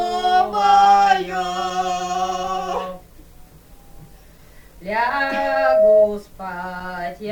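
From 4.96 to 6.15 s a loudspeaker feedback squeal rises: the microphone re-amplifies its own speaker output until a 635 Hz tone runs away, swelling over about a second to roughly 10 dB above the sound. A spectrogram shows one bright horizontal line; the waveform's envelope balloons.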